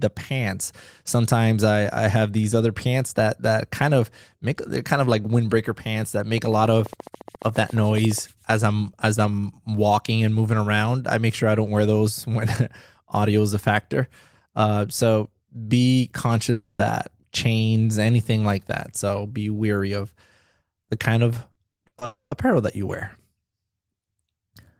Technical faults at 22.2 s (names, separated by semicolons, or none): long network dropout